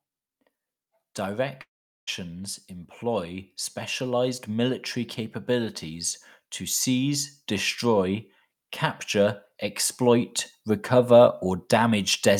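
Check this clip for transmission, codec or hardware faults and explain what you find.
Two faults stand out in this speech clip: a gap early on, then a gradual level rise.

From 1.61 to 2.09 s, the last sound smears into a fading buzz and then goes silent before the voice resumes with a chunk missing, likely a long network dropout.

Between 2.99 and 4.91 s, just before "capabilities to seize", automatic gain rising lifts voice and background together by about 3 dB as the AGC pushes up its gain.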